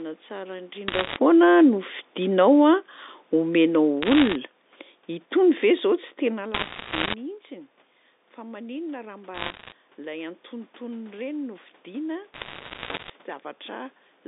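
Telephone speech carried on a G.711 line limited to about 250 Hz to 3.7 kHz, with bit errors on a digital phone line at 0.88–1.16 s, 4.02–4.35 s, 6.54–7.14 s, 9.34–9.72 s and 12.34–13.1 s. Flipped bits each corrupt a single logarithmic sample, so the speech gains bursts of sharp ticks and crackle, densest around 6.5–7.1 s. An automatic gain falling effect runs from 3.34 to 4.46 s, where the gain control judged the input too loud or its background noise too strong and eased the level down by 3 dB, lowering speech and background together.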